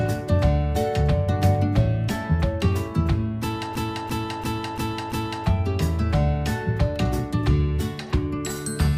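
From 3.76 to 5.46 s, a 341 ms fragment stutters five times at about 2.9 Hz: a system hang loop, as the frozen driver's ring buffer kept replaying, which fits a 16384-sample buffer.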